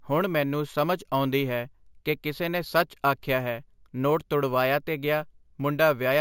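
From start to finish the speech carries imaging from sample-and-hold upsampling, which fits audio raised from a 16 kHz rate to 48 kHz by simply repeating each sample without an anti-imaging filter. A mirrored copy of the spectrum folds up into the 8 to 16 kHz band at about 20 dB below the signal, heard as a metallic fizz that tracks the speech level. A spectrogram shows an inverted echo of the voice's harmonics above 8 kHz, and the waveform shows stair-stepped samples.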